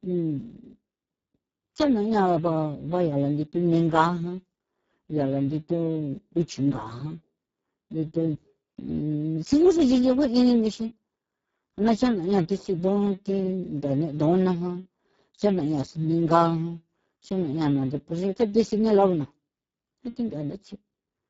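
From start to finish the speech sounds hoarse, buzzy and noisy, with a mechanical, robotic edge and nothing above about 7.7 kHz. Sibilants and the upper band come across as a hissy, shaped fill rather than real detail. The cause is heavy Speex codec damage. At this low quality setting the CELP coder has too few bits to model the excitation properly, which fits a bitrate of around 6 kbps, and the top octave is only synthesized noise.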